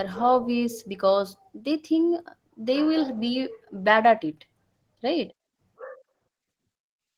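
Throughout this speech clip the voice sounds hoarse, grainy and slightly robotic, typical of Opus voice compression in hybrid mode at a low bitrate, around 16 kbps, coding the excitation coarsely.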